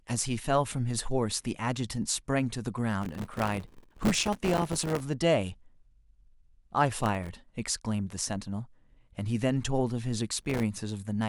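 Gritty, tearing crackle rides on the speech from 3.02 to 5.00 s, again from 7.00 to 7.29 s, and from 10.40 to 10.63 s. This is processor overload crackle: buffers of roughly a millisecond or two missed their deadlines in rapid succession, each leaving a hard-edged silent gap.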